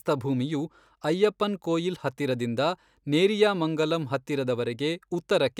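No technical faults can be heard anywhere in the speech recording. There is nothing in it to place in time or trace back to a cause.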